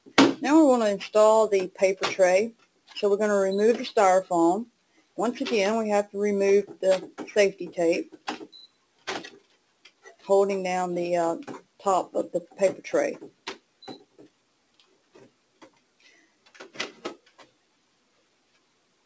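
From the start, a noise suppressor applied to music or sounds, one built for speech, keeps reading sustained tone and ambience as noise, so the level swings by around 10 dB. Onsets stay intact while held sound pumps and thins, unlike a compressor, which reacts to loudness rather than steadiness. The band stops at 8 kHz, which fits a G.722 call path at 64 kbps.

Sound cut by the noise suppressor then sinks by up to about 18 dB at 2.51–2.96 s, 4.66–5.18 s, 8.04–9.08 s, 9.3–10.27 s, 11.6–11.85 s, 13.24–16.76 s and 16.92–19.05 s. Tails and sustains fade early instead of dropping to silence, which separates this from packet-loss dropouts.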